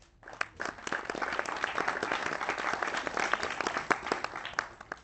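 The sound here has been carried over a call link, and the sender's clock runs roughly four percent faster than the receiver's. That is clock drift between sender and receiver. Because audio keeps arriving slightly faster than it is played out, the jitter buffer keeps creeping toward overflow, and the receiver must throw material away to stay in step. On a waveform the envelope shows no dropouts, but small seams appear wherever a piece was removed. On a spectrogram those seams show as faint vertical discontinuities where sustained components jump slightly.

Those removals are the repeated timing corrections, heard from 0.11 s to 4.85 s. They are small cuts, all shortening the audio and unevenly spaced, so the sound plays at about 104% of its natural pace with faint hiccups rather than any steady rhythm. A spectrogram shows each cut as a tiny break in continuous bands, scattered irregularly along the time axis. 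The content there tops out near 8 kHz, which fits the Opus codec used on the call.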